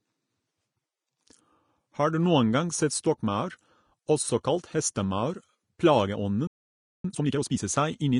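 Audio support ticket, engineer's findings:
Low-bitrate audio saved at a high bitrate, whole clip. Smeared, swirly detail. The current MP3 layer adds almost nothing. The smear fits a first encode near 32 kbit/s, likely Vorbis, later re-saved at 192 kbit/s.

Playback stall, 6.47 to 7.05 s. Output drops to silence for about 0.57 s mid-phrase, then resumes. Likely cause is an empty playback buffer or a blocked player thread.

Time-compressed catch-up, 7.05 to 7.61 s. Audio runs at 2x speed with unchanged pitch. The player cuts and cross-fades small segments to clear the backlog left by the stall.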